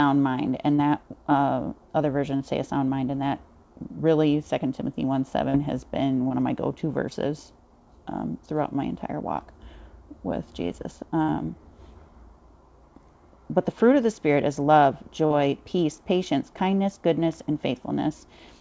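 Brief smears or wobbles appear at 0.76 to 0.80 s, 2.36 to 2.42 s, 5.50 to 5.56 s and 6.28 to 6.32 s. This is short concealed packet loss: 20 to 40 ms of audio never arrived, and the receiver extended the preceding sound across the hole before blending back in.

At 11.22 to 11.30 s a held, fading tail covers a gap, and the audio then resumes slightly further on. This is a burst of packet loss: about 60 ms went missing in a row, and the concealment stretched and attenuated the last sound across it.

At 15.26 to 15.32 s another brief smear marks a further short concealed packet loss of about 40 ms. Throughout, the audio has nothing above 8 kHz, which fits a G.722 call path.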